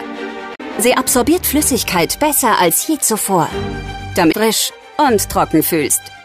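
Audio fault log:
0.54–0.61 s and 4.29–4.35 s, damaged data in a compressed stream: two short bursts, each about 64 ms, where the decoder hits corrupted frames, misreads them and loses sync until it finds the next valid header, so you get a brief chirp, squawk, click or short hole instead of the sound.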